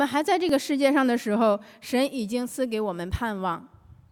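At 0.49 s and again at 2.49 s there is an overlap between stream segments: two pieces of the stream claimed the same stretch of time, and trimming that shared span discarded audio that was never actually duplicated. Each loss is brief and heard as a small click or skip, recurring on the 2.0 s segment grid. On a waveform the trace jumps abruptly; a spectrogram shows a thin vertical broadband line at each point.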